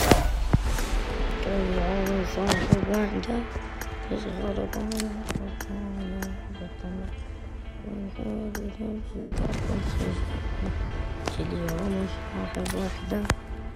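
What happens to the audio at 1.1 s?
A few samples were likely dropped from the stream at 1.1 s, so the waveform jumps ahead a fraction of a millisecond, producing one sharp click.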